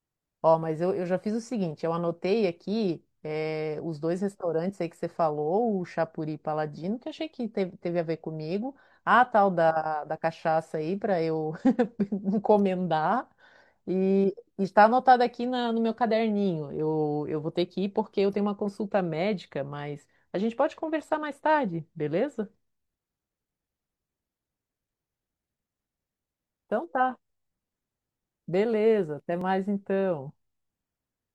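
At 29.41 s the speech jumps forward with no gap of silence. This is likely a dropped buffer (overrun): the samples were overwritten before being read, so under two milliseconds of audio vanished and the two sides were spliced directly.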